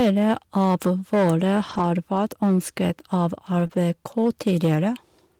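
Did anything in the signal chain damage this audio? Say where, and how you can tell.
Yes. Throughout the speech, peaks break into a harsh, crackly fuzz. That is hard clipping at a gain or conversion stage: the level was driven about 8 dB past what it could pass, flattening the tops of a small share of samples and spraying high harmonics.

From 1.69 to 1.83 s, and again from 3.59 to 3.65 s and 3.71 to 3.77 s, the speech turns briefly rough and noisy without dropping out. This is a lost packet rebuilt from error correction, a network-side loss. The decoder played low-bitrate copies carried in following packets, covering 80 ms, then 40 ms twice.

Between 3.67 and 3.71 s, wedged between the two later rebuilt stretches, there is a short smeared blip. That is short concealed packet loss. About 20 ms never arrived, and the decoder filled 18 ms by extending the preceding sound before blending back into real audio.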